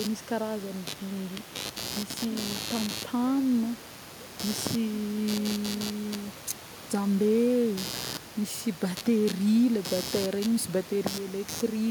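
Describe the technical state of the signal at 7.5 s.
At 7.5 s computer activity noise runs under the speech, as it does for the whole clip. Computer load changes shifting the shared ground produce a buzz pulsing around 100 times a second, only about 10 dB below the speech, seen as evenly spaced vertical stripes on a spectrogram.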